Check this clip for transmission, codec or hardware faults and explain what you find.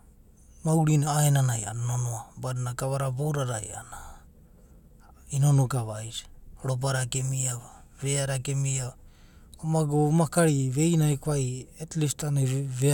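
No transmission, codec or hardware faults.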